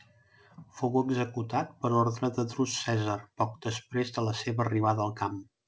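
Nothing stood out on listening to this speech, which comes through a G.722 call path that carries nothing above 8 kHz.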